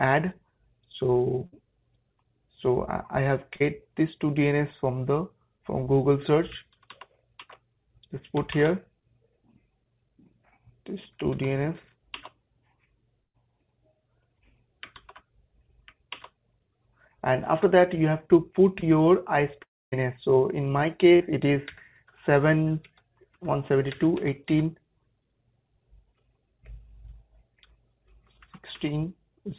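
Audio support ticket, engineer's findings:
Burst of packet loss at 1.46–1.54 s and 13.24–13.36 s. Receiver extends the last sound as a decaying buzz or hiss for about 60 ms and 100 ms respectively; audio resumes later with that span missing. Probable component: network path / jitter buffer.

Short concealed packet loss at 3.56–3.62 s, 5.84–5.88 s, 18.80–18.84 s, 21.16–21.22 s. Brief smear or wobble where 20–40 ms never reached the decoder; concealment synthesises from the preceding sound, then crossfades back into real audio. Short transients may drop out.

Long network dropout at 19.62–19.94 s, likely upstream network outage. About 300 ms absent; concealment extends the last sound and fades it, leaving roughly 250 ms of silence before audio returns past the lost section. Band-limited to 4 kHz, consistent with a G.711 mu-law call path.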